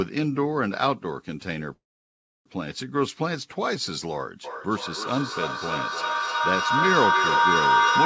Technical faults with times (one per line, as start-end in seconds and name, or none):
1.74-2.47 call audio freeze
4.44-8.05 feedback howl